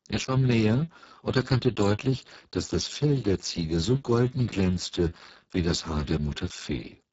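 Speech throughout carries heavy Speex codec damage, sounding hoarse, noisy and near-robotic, consistent with a low setting around 6 kbps, with nothing above about 7.7 kHz.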